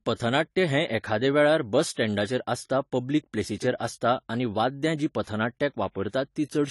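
Throughout the speech, a lossy transform codec has run short of bits. The sound is dull and smeared, with nothing above 11.5 kHz and a watery, fizzy texture on sustained sounds and sibilants. This is likely AAC compression, and the plainly audible damage fits AAC-LC at a low bitrate of around 32 kbps. The encoder has lowered its cut-off and coarsened the quantisation until whole bands thin out.

The same codec produces pre-echo. When a sharp onset lands late in a transform block, quantisation noise sized for the loud attack spreads back into the quiet moment before it. A brief hiss leads each attack and blurs it. This happens from 1.92 to 1.96 s (44 ms), from 3.78 to 3.80 s (22 ms), from 5.23 to 5.27 s (44 ms) and from 6.09 to 6.13 s (44 ms).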